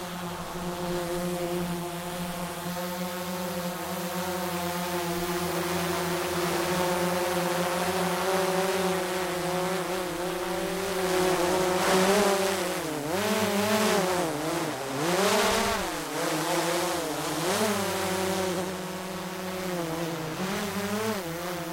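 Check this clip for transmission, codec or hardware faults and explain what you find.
I can hear no faults anywhere in the recording. There is nothing here that calls for an explanation.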